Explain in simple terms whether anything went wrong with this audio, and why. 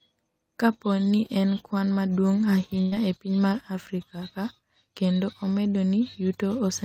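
At 2.81 s the speech turns briefly into a held, fading sound for about a tenth of a second, then jumps ahead into "e piny mar" with roughly 100 ms missing. This is a burst of packet loss: a run of data never arrived, so the player stretched the last sound to cover the gap.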